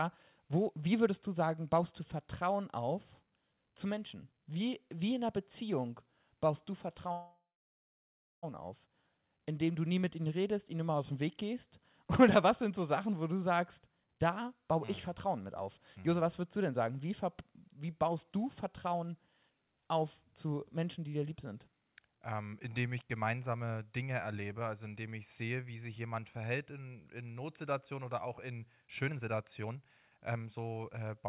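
Call audio freeze, 7.12 to 8.45 s: the sound stalls, the last bit is carried on as a fading buzz, and about 1 s of that stretch is near silence. This is likely packets held up in transit draining the jitter buffer. The sound then resumes where it stopped, with nothing lost and about 1.3 s of extra delay.

Jitter buffer speed-up, 13.42 to 13.96 s: the speech runs at 110% with its pitch unchanged and sounds briefly hurried. The receiver trims small pitch-period pieces over and over, about 70 ms in total, to shrink the backlog in its buffer.

Skip ahead, 14.04 to 14.07 s: playback jumps forward almost seamlessly, dropping roughly a tenth of a second of speech. A chunk was dropped, either in transit or by the jitter buffer overflowing, and the two sides were joined nearly directly, cutting the delay by about the same amount.

Further jitter buffer speed-ups follow at 108%, from 14.40 to 16.22 s (about 150 ms removed) and from 18.04 to 22.54 s (about 400 ms removed). 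The speech sounds rushed at the same pitch. From 28.82 s to the end the speed-up is stronger, at 122%, removing around half a second, and the speech sounds noticeably hurried. Throughout the clip the sound is narrowband, with nothing above 4 kHz, which fits a G.711 A-law call path at 64 kbps.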